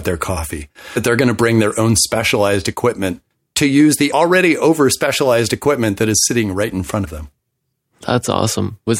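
At 0.95 s and again at 7.04 s the speech is broken by a brief blip, each under 20 ms, caused by damaged data in a compressed stream. Corrupted bytes left the decoder unable to read those frames, so it lost sync while hunting for the next valid frame header.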